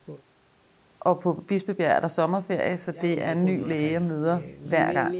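No technical faults heard.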